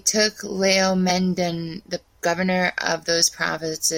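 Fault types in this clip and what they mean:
Damaged data in a compressed stream: corrupted bytes made the decoder misread frames and lose sync, leaving a brief glitch of about 10 ms in the speech at 1.09 s.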